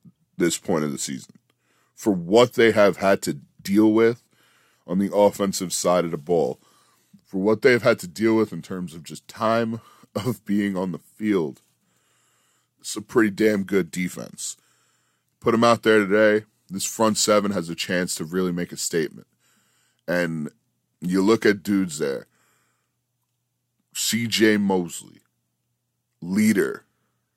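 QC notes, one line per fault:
No faults found on this speech recording.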